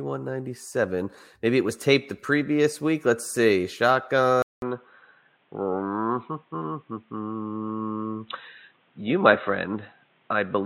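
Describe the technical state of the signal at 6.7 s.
Input switched to a poorer device, from 4.42 s to the end of the clip: at 6.7 s the speech is band-limited, with nothing above 3.9 kHz, so it sounds dull and boxy compared with the opening. The change follows a gap of about 200 ms at 4.42 s, and brings a new noise floor roughly 40 dB below the speech with little change in loudness. This likely reflects the recording moving to a narrower-band microphone or headset call profile.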